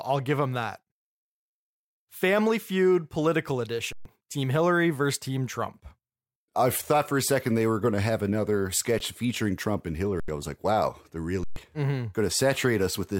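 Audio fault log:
3.93–4.05 s, underrun with held sample: the speech stops dead for 128 ms with little or no click going in. The output buffer ran empty, the converter held its last value flat, and about 150 ms of live audio was skipped.
8.99 s, underrun with held sample: a 14 ms flat hold, where roughly 15 ms went missing.
10.20–10.28 s, underrun with held sample: an 85 ms (4096-sample) flat stop. About 100 ms is lost.
11.44–11.56 s, underrun with held sample: another 128 ms flat hold, with around 150 ms lost.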